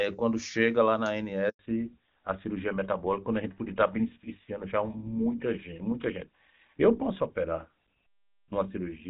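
A network handover interrupts this speech recording at 1.49 s, right after "quando chega lá na". While the call was passed from one link to the other, no speech frames got through, so the sound cuts out almost at once and stays silent for 100 ms, until 1.59 s. Whatever was said in that window is gone. When the new link starts, the call has also fallen back to narrowband. Before the gap, the audio has the wide, clean top end of HD Voice, which fits AMR-WB at its highest rate of 23.85 kbit/s. From 1.59 s to the end, nothing above 4 kHz remains. The voice sounds duller and rougher, as the older codec, likely GSM full rate, gives up the upper band and the finer detail in the speech.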